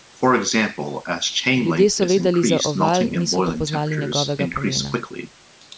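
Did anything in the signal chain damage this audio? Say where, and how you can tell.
No, nothing in the signal chain damaged this audio, and the call microphone processing it passed through, with its bass trimmed and nothing above 8 kHz, is working as intended.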